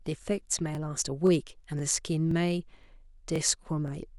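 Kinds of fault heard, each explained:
Overlapping chunks: a brief stutter or click roughly every half second, as each 0.5 s chunk starts early and replays 21 ms of speech at the join.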